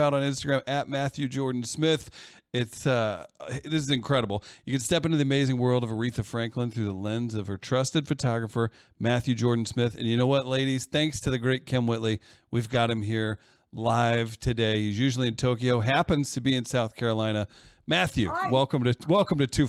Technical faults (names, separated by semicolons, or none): lost packet rebuilt from error correction